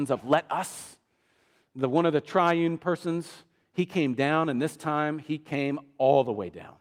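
No technical faults are audible.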